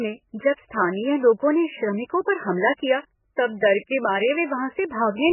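A speech clip with a dull, watery sound throughout. Nothing remains above 3 kHz. The remaining detail swirls and flickers as weak components drop in and out, and consonant attacks smear. This is likely heavy MP3 compression, at a bitrate as low as about 8 kbps.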